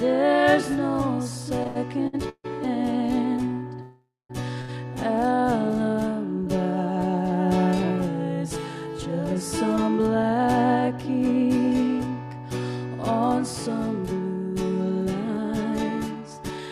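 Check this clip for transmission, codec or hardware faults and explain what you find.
Four kinds of network playback fault are audible, all from the receiver's jitter buffer rather than from the codec or hardware.

Repeated stalls (stutter), 1.63 to 2.46 s: packets arrived late four times, so the buffer kept running dry and the receiver filled about 306 ms by continuing the last sound, the longest hold 149 ms. Over a third of this stretch is filled-in, so the sound drags and stutters without losing anything.

Call audio freeze, 3.82 to 4.31 s: the sound suddenly holds as a fading buzz or hiss, then drops to silence for about 200 ms before resuming exactly where it stopped, 474 ms later. The likely cause is packets held up in transit emptying the jitter buffer.

Short stall from a late packet, 4.61 s to 4.71 s: one packet missed its slot, so the receiver stretched the preceding sound by 71 ms until it arrived. 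The result is a briefly held sound, and nothing is lost.

Jitter buffer speed-up, 10.07 to 10.47 s and 15.28 to 16.67 s: the buffer held too much audio, so the receiver trimmed many pitch-period-sized pieces. The sound runs faster at 108% and then 113% with the same pitch, and seems hurried, especially near the end.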